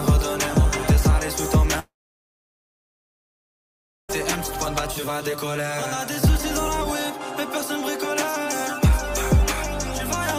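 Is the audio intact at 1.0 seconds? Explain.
Yes, the audio is intact at 1.0 seconds, with no dropout, click, distortion or other fault at that moment.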